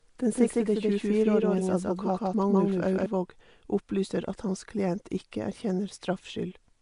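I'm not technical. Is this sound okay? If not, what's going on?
No. The whole clip has a rough, hissy, underwater sound, most likely from Nellymoser compression, an old Flash-era microphone codec that squeezes audio very hard.

From the start until 3.06 s there's a doubled audio track: a second, equally loud copy trails about 0.15 s behind, then cuts off abruptly.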